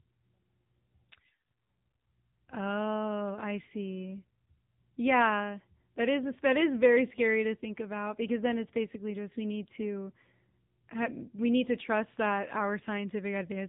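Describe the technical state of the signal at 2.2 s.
At 2.2 s the speech sounds buzzy, boxed-in and synthetic, with plainly audible codec damage and nothing above 4 kHz. This is AMR narrowband mobile codec coding, present throughout the clip. AMR-NB samples at 8 kHz and rebuilds the voice from a vocal-tract model fed by a few pulses per 5 ms subframe. The coarseness here fits one of its lower modes, around 8 kbps.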